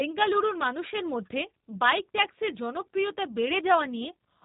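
From start to finish the speech carries G.729 codec damage, plainly audible. The sound points to an 8 kbit/s G.729A stream, rebuilt from a vocal tract filter, pitch prediction and sparse pulses, so voices come out rough and synthetic, with nothing above 3.8 kHz.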